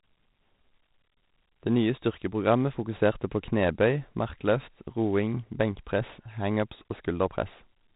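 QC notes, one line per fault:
Throughout: 4-bit ADPCM compression. Heavy gritty hiss rides the speech level, worst on loud syllables and sharp onsets where the adaptive step size lags. Nothing is heard above 3.8 kHz, which fits roughly 32 kbps at an 8 kHz rate. There is no warbling or swirling, unlike perceptual codecs.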